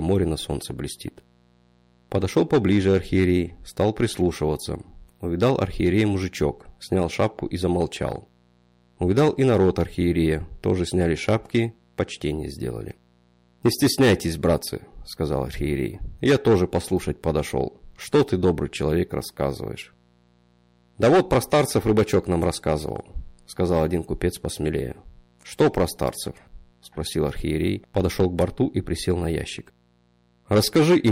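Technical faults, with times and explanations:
Throughout, mains buzz: a steady, raspy buzz sits underneath the sound for the whole clip, built on a 60 Hz fundamental with a dense stack of harmonics climbing well into the kilohertz range. Sharp switching spikes, such as those from a dimmer, a rectifier or an unshielded run, enter the signal chain twice per mains cycle, and their abrupt edges spread energy across many harmonics. That is why the interference rasps rather than hums. It stays quiet, roughly 40 dB below the main signal.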